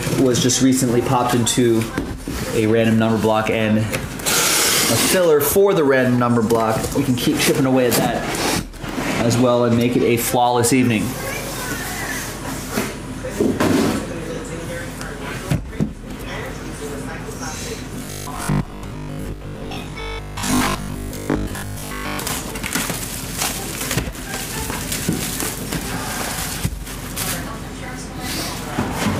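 Robotic sound from repeated short buffers runs from 17.99 to 22.19 s. The sound turns rigid and metallic, locked to a steady buzz at 50 Hz while still loosely tracing its original contour. The likely cause is audio arriving too slowly, so playback keeps looping the most recent fragment in place of the missing material. A 50 Hz buzz fits a repeated slice of about 20 ms, and most of the stretch seems to be filled this way.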